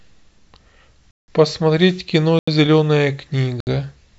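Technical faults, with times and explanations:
1.11 to 1.28 s, 2.39 to 2.48 s and 3.60 to 3.67 s, blocks of digital silence: three times the output stopped delivering samples and a stretch was written as zeros, which points to a buffer left unfilled in time. The speech drops straight to dead silence for 171 ms, 85 ms and 66 ms (the first two fit blocks of 8192 and 4096 samples), with no fade.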